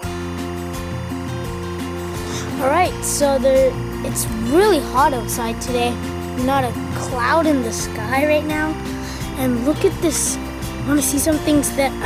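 A steady chirping warble sits under the audio for its whole length, roughly 20 dB below the programme. This is timecode bleed: linear timecode at 24 frames per second, flipping between tones near 1 kHz and 2 kHz, leaking in from an adjacent track or cable.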